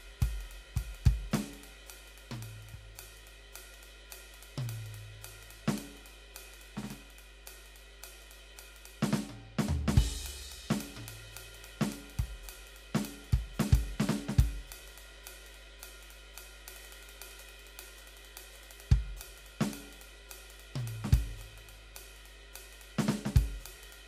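Mains hum runs under the music from start to finish: a steady 50 Hz drone, sitting roughly 20 dB down, from power-line pickup through a ground loop or transformer.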